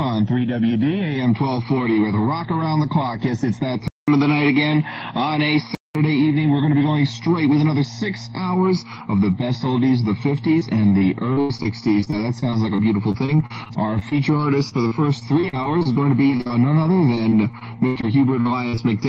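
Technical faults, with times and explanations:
3.88 to 5.95 s, input switched to a poorer device: the sound likely moved to a lesser microphone. It drops out for 200 ms at the switch, then turns duller, with nothing above 5.7 kHz, a faint new noise floor well below the signal, and roughly unchanged level.
10.59 to 18.05 s, repeated packet loss (robotic sound): dozens of gaps, the longest 85 ms and about 1.06 s missing in total, are each patched by extending the preceding sound. Roughly a seventh of this stretch is synthetic fill, so it turns choppy with pieces missing.
18.41, 18.69 and 18.75 s, short concealed packet loss: three brief holes of about 40, 40 and 20 ms, the last two back to back, are bridged by continuing the previous sound and then blending back in. Each is heard as a quick smear or wobble.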